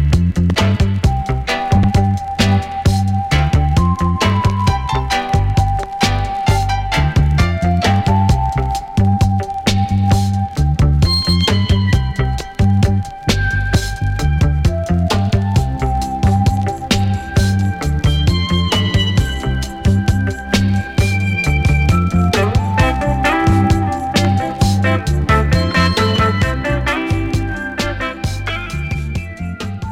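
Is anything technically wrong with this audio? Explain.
No, nothing technically wrong is audible anywhere in this recording.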